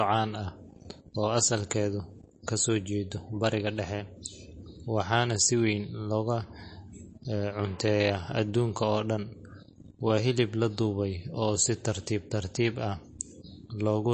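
Across the whole of this speech recording the sound is dull and watery, with nothing above about 8.3 kHz and a swirly, chirping quality on s sounds and other hiss-like consonants, while sharp onsets are softened and smeared. The likely cause is heavy MP3 compression, and the damage is plainly audible, in a way that fits a low bitrate of around 32 kbps. The starved encoder has cut the treble at a fixed point and keeps dropping and restoring weak frequency lines from frame to frame.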